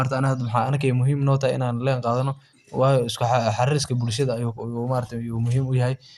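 From start to finish the speech is band-limited, with nothing above about 12.2 kHz, and carries a plainly audible gurgling, granular roughness. The likely cause is MP2 compression at a low bitrate, around 80 kbps. The encoder splits the signal into sub-bands and shares too few bits among them, so the upper bands are switched off and the remaining ones are coarsely quantised, leaving the speech dull and grainy.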